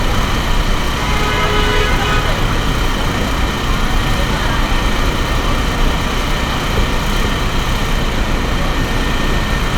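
No technical faults can be heard anywhere in the audio.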